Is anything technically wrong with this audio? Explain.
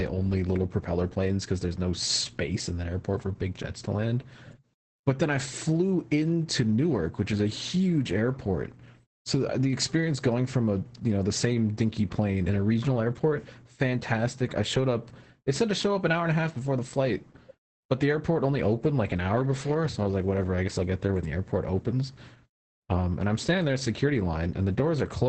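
Yes. Throughout the speech there is heavy Opus voice compression. The SILK linear-prediction coder runs in wideband, so nothing remains above 8.7 kHz, and its coarsely coded excitation, which fits a bitrate around 10 kbps, leaves the speech muffled, hoarse and slightly robotic.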